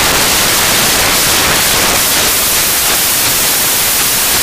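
Samples built from the wrong bytes run from start to finish of this speech clip: each sample's bytes are assembled out of order or misaligned, so the rapidly changing low bits dominate. The result is loud, harsh broadband noise throughout, close to white on the louder speech.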